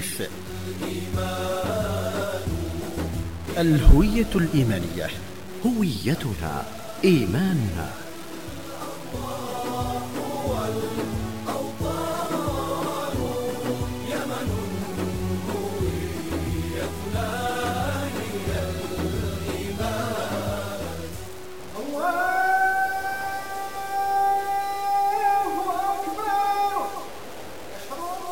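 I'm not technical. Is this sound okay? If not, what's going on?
No. From start to finish the sound has a grainy, gritty roughness that rises and falls with the sound itself, and the quietest moments sputter or cut out to silence rather than fading smoothly. The likely cause is low bit depth without dither: the audio was stored with far too few steps of loudness, which fits about 6 bits, and simply chopped down to the step below, so the rounding errors track the sound and turn into audible grit.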